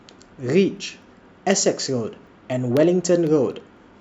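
Regular ticks, four per second, mark the speech from 0.27 to 3.77 s: periodic USB or driver dropouts, each silencing a fraction of a millisecond.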